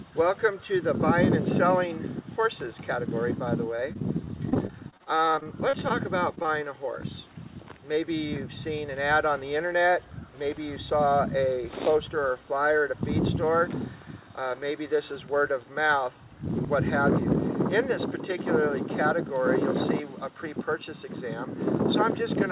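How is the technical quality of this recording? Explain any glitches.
The recording has three kinds of network glitch. Its upper limit is a hard ceiling with nothing above 4 kHz, which points to a G.711 mu-law call codec at 64 kbps.

From 3.76 to 5.92 s there is repeated packet loss, which gives a robotic sound. About twenty gaps, the longest around 36 ms, were each patched by extending the previous sound. Concealment covers roughly 16% of the stretch. The result is choppy. On a spectrogram it appears as repeated smeared, striped columns.

At 6.35 to 6.39 s and again at 6.43 to 6.46 s there is short concealed packet loss, with about 20 ms missing each time. The receiver continued the last sound and then blended back into the real audio. Each one is a brief smear or wobble. The waveform shows two small smooth patches where detail flattens.

From 8.76 to 9.44 s there is a jitter buffer speed-up. 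The buffer held too much audio, so the receiver trimmed short pitch-period slices, about 50 ms in total. The sound runs roughly 6% fast at unchanged pitch and feels hurried. On a spectrogram the harmonics stay level but the events sit closer together.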